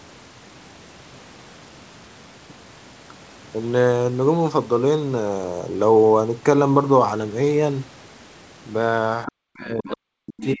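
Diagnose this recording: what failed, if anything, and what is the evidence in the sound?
The trouble sits in the call processing stage, right at the end of the clip. Three short scraps of other side's voice leaking through show up at 9.26 to 9.31 s, 9.91 to 9.96 s and 10.37 to 10.45 s. They're faint, roughly 15 to 20 dB under the talker. The likely cause is that the far end's audio played out of the device's loudspeaker, got picked up by the mic, and the echo canceller didn't fully subtract it.

Overlapping that, from 9.27 s to the end at 10.6 s, the talker's own speech is being suppressed in double talk. Their level sags and breaks up, and at its deepest it's pulled down by something like 40 dB. That's likely the echo canceller seeing both sides active at once and, unable to tell the near talker from the loudspeaker echo, turning everything down. So the echo leaks and the real speech gets squashed together.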